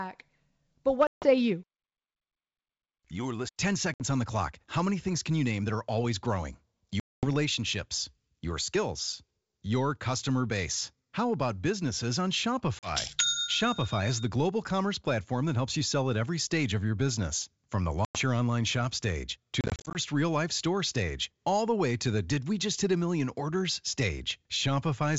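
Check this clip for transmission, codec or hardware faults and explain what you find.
Packet loss on an ADPCM call is present, on a G.722 wideband link at 64 kbit/s. Dropouts occur at 1.07–1.30 s (150 ms lost), 3.94–4.02 s (60 ms), 7.00–7.29 s after "that are always growing" (230 ms), 12.79–12.92 s after "about businesses on" (40 ms), and 18.05–18.20 s (100 ms). Between "your online shop stage" and "real life store stage", 180 ms is lost in short gaps of up to 30 ms each, scattered across 19.61–19.98 s. Missing packets become abrupt silences. The receiver's adaptive predictor and step size then disagree with the sender's, so speech resumes with brief, slight distortion that settles within tens of milliseconds.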